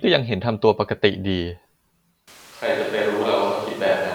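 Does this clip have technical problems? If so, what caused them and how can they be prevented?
Yes. At 2.28 s the speech abruptly turns roomy and hollow, loses low-end body, and drops roughly 5 dB in level, with room noise rising to around 25 dB below the speech; it stays that way to the end. This is a switch to a distant microphone, likely because the close mic's feed failed or dropped out and a far-off backup mic took over. Monitoring the close mic live and recording a separate safety track would prevent it.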